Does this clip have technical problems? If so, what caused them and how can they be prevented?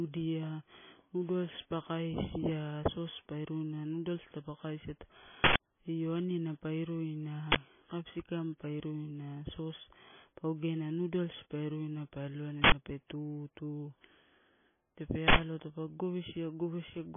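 Yes. Throughout the speech the encoder was likely starved of bits by MP3 compression at a rate that fits roughly 18 kbps. It discarded everything above 3.5 kHz and dropped weaker frequency lines that flicker in and out between frames. The result is dull, band-limited speech with a watery, swirling texture, hissy consonants turned metallic, and smeared onsets. Encoding speech at 64 kbps or more, or using a codec designed for low-rate speech, would prevent this.

Four bursts of loud digital noise come from an uninitialised buffer. The output stage played blocks of memory before any audio had been written into them, so leftover data came out as samples. The first is at 5.44 to 5.6 s, a 160 ms burst between "taupe kaisia" and "io aniana pa iruina". The second is a 40 ms burst at 7.52 to 7.56 s, just before "capsikam pa iruina". Two 80 ms bursts follow at 12.64 to 12.72 s, right before "pe tutu", and at 15.28 to 15.36 s. 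Each replaces the audio with harsh noise. Zero-filling buffers on allocation and blocking playback until each buffer is filled would prevent these bursts.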